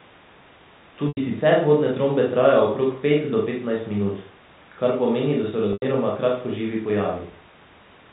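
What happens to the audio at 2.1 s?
Nothing goes wrong at 2.1 s: the speech carries on intact through that moment, with only the narrow telephone band of its G.711 coding, which lets nothing above 4 kHz through.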